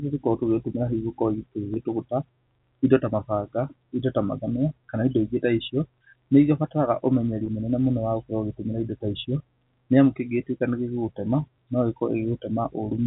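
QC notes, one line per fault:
1.74–1.76 s and 7.46–7.48 s, packet loss with pitch repetition: about 20 ms of audio goes missing each time, which fits a single lost packet. The receiver fills each gap by repeating the last pitch period, so the sound briefly holds as a slightly held, buzzy sustain. Unlike a plain dropout, there is no hole of silence and no click. The gaps are short enough that the repetition never fades out. The G.711 telephone band around them stays steady.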